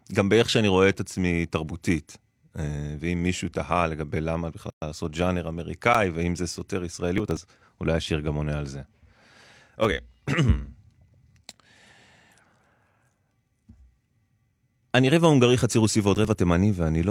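At 4.70 to 4.82 s the speech stops dead for 119 ms and then picks up exactly where it left off. This is a gap at a join of encoded pieces. Two separately encoded segments were butted together without trimming, so the first encoder's end-of-stream padding and the next one's start-up delay both survive as silence. A spectrogram shows a clean vertical band empty at all frequencies, and the waveform shows a flat line whose edges are slightly softened by the codec.

A block of digital silence follows at 5.94 s. For about 10 ms the sound drops out to silence, probably because the output buffer was not filled in time. The hard cut in and out gives a sharp tick. On the waveform it is a short flat segment. On the spectrogram it is a narrow blank slit with a thin broadband line at each edge.

From 7.18 to 7.37 s there is processor overload crackle. Buffers of roughly 10 ms were missed one after another, around ten of them, and each was skipped rather than held. 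The result is a gritty, tearing burst riding on the speech. The waveform shows a run of tiny dropouts and abrupt steps. The spectrogram shows a cluster of vertical broadband streaks.

Two more blocks of digital silence occur at 8.06 s and 9.85 s, each 2.67 ms long, which fits a 128-sample buffer. Each is heard as a small click. Each appears as a hairline gap and a faint vertical line.

The crackle returns from 16.15 to 16.35 s with around seven skipped buffers, showing the same streaked pattern.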